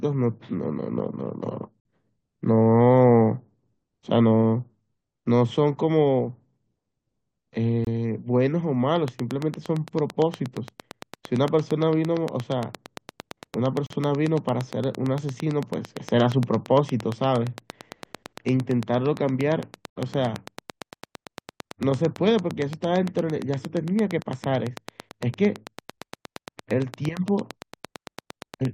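Gaps between stream segments occur at 1.80–1.85 s, 7.85–7.87 s, 13.86–13.90 s, 19.90–19.96 s and at 25.98 s. They fall about every 6 seconds, which fits segments of that length whose timestamps don't quite meet. The player pads each gap with silence, so the speech stops abruptly for about 51, 24, 39, 61 and 7 ms, with hard edges. Nothing is lost, only delayed.

A train of clicks runs from 8.96 s to 28.66 s. About 150 near-identical pulses arrive at a steady 8.78 per second and peak roughly 10 dB above the speech. They are heard as a regular ticking over the speech and through its pauses. The likely cause is interference from nearby equipment or a faulty connection or power supply injecting a pulse at that rate.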